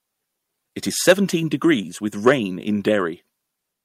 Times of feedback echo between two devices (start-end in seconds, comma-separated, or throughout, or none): none